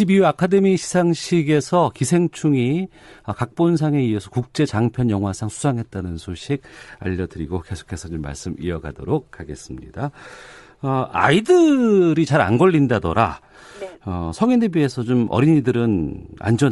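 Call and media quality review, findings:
Bluetooth LC3 compression, throughout the clip: plainly audible codec damage on the speech. The likely cause is the LE Audio transform codec coding short frames, consistent with 7.5 ms framing at about 48 kbps, coarsely quantising the spectrum in each frame.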